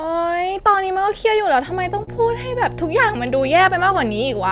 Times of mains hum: 1.65-4.52

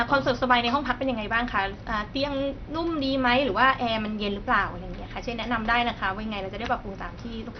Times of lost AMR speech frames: none

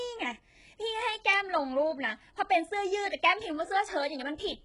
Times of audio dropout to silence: none

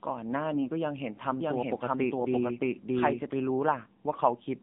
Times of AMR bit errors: 0.52-0.68

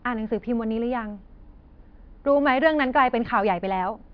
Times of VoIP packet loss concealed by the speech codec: none

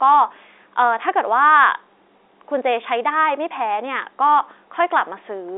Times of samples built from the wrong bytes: none

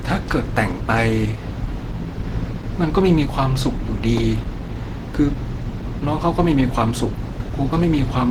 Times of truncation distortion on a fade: none

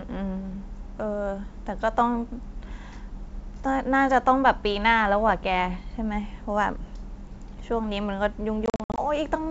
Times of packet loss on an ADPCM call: 8.66-9.00

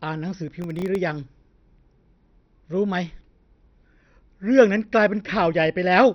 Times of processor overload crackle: 0.62-0.96

